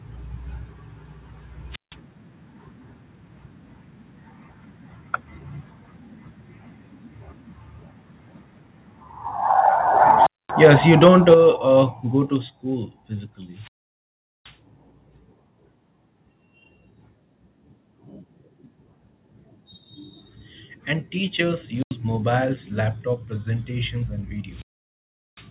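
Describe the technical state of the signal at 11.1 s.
At 11.1 s, within 10.63–11.34 s, the speech peaks sound flat-topped and crackly: likely microphone overload, driving peaks about 3 dB past the converter's limit.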